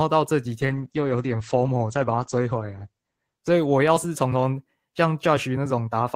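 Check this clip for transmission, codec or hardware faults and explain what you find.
One fault is audible, a call bitrate drop from 0.67 to 4.27 s. The encoder was starved of bits, which fits a fall from 32 to 10 kbps. Coarser coding makes the speech rough and watery. Highs vanish above 8 kHz, muffling it. The worst stretch lasts 2.25 s.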